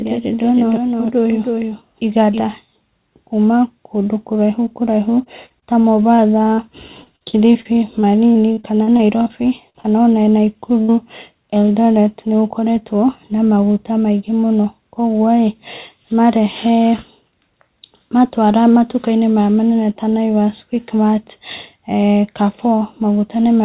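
A second copy of the audio, most likely captured again by a slower path, is mixed in from the very start, trailing the original by roughly 300 ms and sitting about 5 dB lower. The speech sounds doubled, with each syllable followed by a dry, full-band echo that has no room decay. That doubling is already running at 0 s and cuts off abruptly at 2.4 s.

From 5.24 to 6.60 s, repeated packet loss leaves seven short holes in the stream, the longest 39 ms, and about 12 percent of that stretch is concealment rather than real audio. The receiver patches each hole by extending the last sound, and the next hole arrives soon after. The speech turns choppy, with small pieces missing.

A second, heavier run of repeated packet loss covers 7.04 to 9.28 s. It has thirteen holes, the longest 47 ms, and concealment fills about 17 percent of the span. The closely spaced patches make the voice choppy, and more of the sound drops out than in the earlier stretch.

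Two bursts of packet loss follow, at 9.70 to 9.76 s and 10.82 to 10.90 s, with about 40 ms and 60 ms of audio lost. In each, the receiver holds the last sound and fades it as the gap runs on, so a voiced sound becomes a brief held buzz and an unvoiced one a fading hiss. The speech then resumes further on with that slice gone.

Between those two bursts, at 9.80 to 9.86 s, is a short concealed packet loss of about 40 ms. The decoder bridges it by continuing the pitch or shaping noise, then blends back into the real signal. It comes across as a quick smear or wobble in the voice, and a short consonant there can disappear. Throughout, the call codec's band limit means nothing is heard above 4 kHz.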